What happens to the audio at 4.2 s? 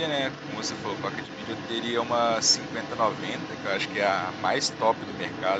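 At 4.2 s the other side's voice is leaking through, a faint second voice running under the main speech from 0.08 s to the end at 5.59 s, roughly 15 dB quieter. It is likely loudspeaker playback picked up by the microphone that the echo canceller failed to remove.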